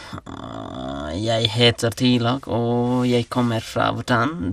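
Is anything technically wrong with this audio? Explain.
Yes. Throughout the speech the sound is dull and carries a gurgling, granular roughness, likely from MP2 compression at a low rate, around 80 kbps. Layer II splits audio into 32 sub-bands; starved of bits, upper bands flicker off and the rest are coarsely quantised, giving blocky band dropouts rather than MP3's swirly pre-echo.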